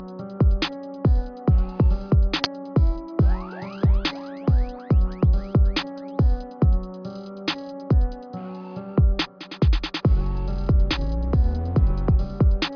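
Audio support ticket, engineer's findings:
Nothing stood out on listening to this one.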